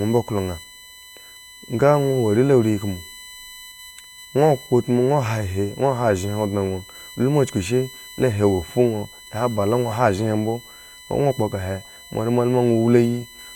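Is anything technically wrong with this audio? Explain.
Yes. Throughout the speech, a steady whine sits at 1 kHz and its harmonics, strongest at 4 kHz, about 20 dB below the signal. It's USB whine: the bus's 1 ms frame current leaks in through power or ground.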